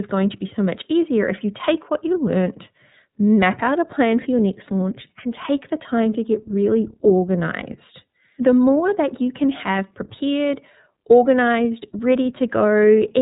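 The speech has been passed through the iLBC codec from start to finish. This narrowband VoIP coder rebuilds each frame's excitation on its own rather than predicting from the previous one, and the framing heard here fits 30 ms blocks at roughly 13 kbps. The result is plainly audible damage. Nothing survives above about 3.8 kHz, so the sound is muffled and telephone-like, and voiced passages carry a rough, slightly synthetic grain.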